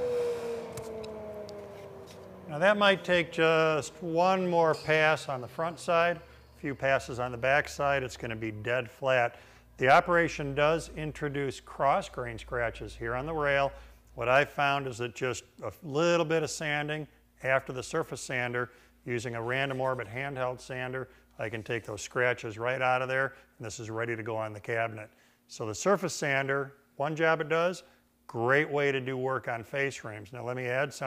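At 9.90 s to 9.99 s there is a brief burst of hard clipping lasting just under 0.1 s. For that moment the signal runs about 4 dB past what the converter or processing stage can pass, so the tops of the waveform are sheared off flat. Those squared peaks generate harmonics high above the original content, and the result is a short, gritty crackle on the loudest part of the sound rather than a sustained fuzz.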